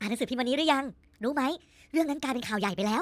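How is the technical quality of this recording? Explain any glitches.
The recording has one fault, present from start to finish: a wrong sample rate. The speech runs about 1.45 times too fast and sits about 6.45 semitones high, so voices sound squeaky and rushed. Speed and pitch shift together because the samples are played back faster than they were captured, with no conversion, a ratio that fits material recorded near 22 kHz being played at 32 kHz. On a spectrogram, every harmonic and formant is stretched upward by the same factor, and on the waveform, syllables and pauses are compressed in time.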